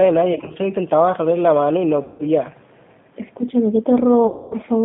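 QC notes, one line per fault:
throughout, G.729 codec: The speech is plainly rough and slightly synthetic, confined to roughly 150 Hz to 3.6 kHz. This fits 8 kbit/s G.729A, which rebuilds each 10 ms frame from a vocal tract filter, a pitch predictor and a few pulses, discarding finer detail.
0.33–0.57 s, 2.03–2.23 s, 4.27–4.55 s, VoIP packet loss concealed by the speech codec: The sound smears into a fading buzzy tone or coloured noise as the decoder extrapolates from its last pitch and filter over missing packets. The first stretch is brief, scattered gaps of 30 ms at most. The others lose about 160 ms and 240 ms.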